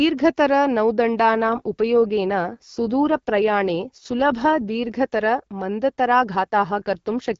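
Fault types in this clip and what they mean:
AMR rate drop: speech turns rougher and more synthetic from 1.34 to 4.96 s and from 6.53 to 7.37 s, which fits the codec stepping down from 12.65 to 8.85 kbit/s. Unlike a bandwidth switch, the top band stays and nothing goes silent.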